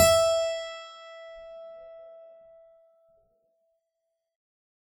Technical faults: WMA compression

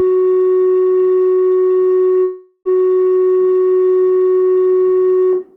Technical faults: long network dropout

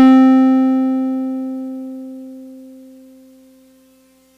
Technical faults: hard clipping

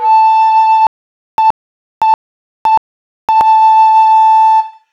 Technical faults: stutter with silent gaps

